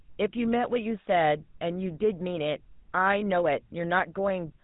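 From start to finish the speech carries GSM full-rate codec damage, and it's plainly audible: that buzzy, gravelly roughness from a vocal-tract model fed by coarse, regularly spaced pulses, with nothing above 4 kHz. It sounds like the old 13 kbps phone codec.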